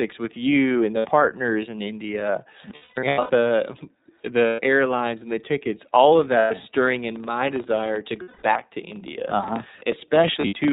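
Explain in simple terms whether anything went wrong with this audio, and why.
Yes, several things went wrong. Throughout, the speech sounds thin, muffled and slightly rough or robotic, as if heard over an old phone line. This is the iLBC codec, a phone-call voice compressor that discards everything above 4 kHz and rebuilds each short slice of sound separately.

Several times the voice turns into a brief held, buzzy or breathy drone before snapping back: at 0.99 s, 2.76 to 3.31 s (patchy, the longest stretch about a fifth of a second), 4.47 s, 6.38 s, 8.22 to 8.43 s, and 10.40 s. These are lost iLBC frames. Pieces of the transmission went missing, so the player repeated the last bit of voice and mixed in noise to cover each hole.

From 6.92 s to the end, a low, steady buzz rides along with the speech at about 25 ticks per second, louder when the voice is louder. This is a filter restarted on every block. 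The sound was processed in chunks, which fits blocks of about 40 ms, and the filter forgot its state each time, adding a tiny click at the start of every chunk.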